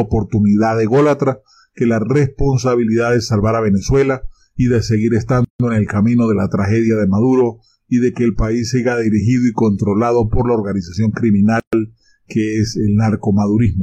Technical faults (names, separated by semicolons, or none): gap at a join of encoded pieces